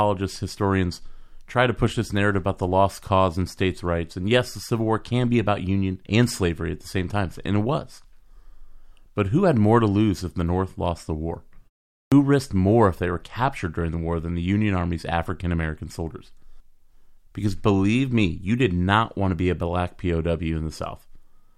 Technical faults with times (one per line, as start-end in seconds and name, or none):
12.08-12.12 clipped start after a pause